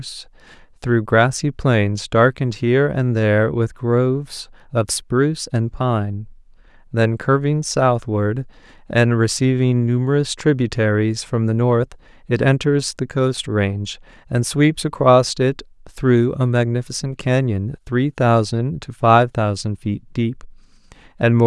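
No technical faults can be heard anywhere in the speech recording; the signal stays continuous and stable throughout.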